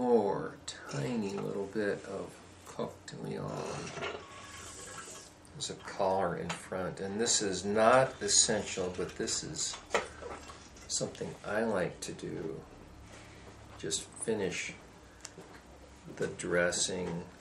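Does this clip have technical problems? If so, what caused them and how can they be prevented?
No technical faults are audible.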